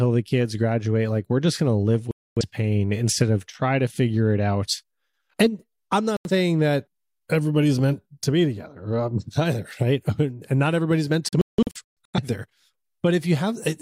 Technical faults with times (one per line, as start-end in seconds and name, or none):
2.11-2.43 digital broadcast dropout
6.17-6.30 digital broadcast dropout
11.29-12.19 digital broadcast dropout